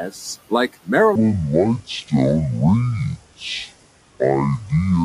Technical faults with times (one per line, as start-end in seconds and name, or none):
0.00-5.04 noise suppressor artifacts
1.15-5.04 section at the wrong speed